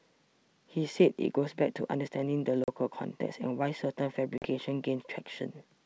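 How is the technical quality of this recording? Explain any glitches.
The recording has two glitches, both from packet loss on an ADPCM call, carried over what sounds like G.722 wideband telephone coding at its full 64 kbit/s mode.

The dropouts fall at 2.64 to 2.69 s and 4.38 to 4.48 s. Each time, about 40 ms of audio went missing, which fits roughly two packets, and the gap was filled with silence. Because ADPCM sends only differences, the receiver's predictor and step size lost track of the sender's. You hear an abrupt hole, then speech returning with brief, slight distortion before it settles.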